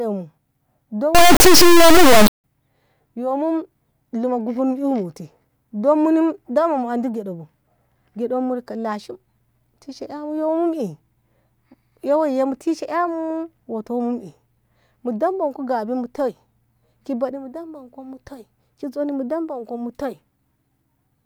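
From 1.15 to 2.44 s the speech becomes a harsh, extremely loud buzzing square wave: integer read as float, with 32-bit integer samples decoded as 32-bit floats.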